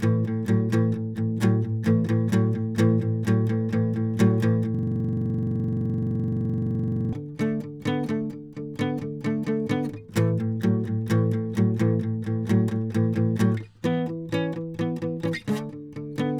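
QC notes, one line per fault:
4.75–7.13 s, system hang loop: the playback machine or its driver stalled while the audio hardware kept replaying the same ring buffer. A 42.67 ms slice of the music repeats exactly, some 56 times in 2.4 s, which fits a 2048-sample buffer. At a 23.4 Hz repeat rate the loop sits between buzz and stutter, a rough, fluttering drone that locks the music in place until output resumes.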